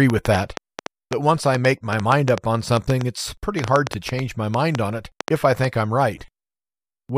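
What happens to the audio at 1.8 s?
At 1.8 s the audio sits inside a train of clicks running from 0.10 s to 5.66 s: roughly thirty sharp ticks, about 5.2 per second at an uneven pace, most likely from electrical interference or a faulty connection or power supply. Each stands well above the speech, showing as a thin spike on the waveform and a vertical broadband line on the spectrogram.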